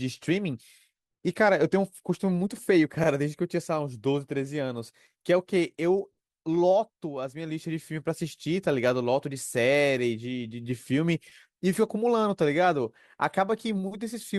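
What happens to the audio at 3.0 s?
A brief stutter from 3.03 to 3.08 s. This is repeated frames: a 40 ms stretch of compressed frames, consistent with two frames, was played a second time, adding 40 ms to the audio.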